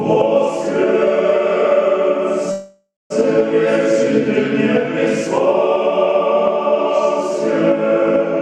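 At 2.51 to 3.12 s there's a call audio freeze: the last sound drags on as a fading buzz or hiss and then goes silent for about 230 ms. It resumes where it stopped, likely from late packets draining the jitter buffer.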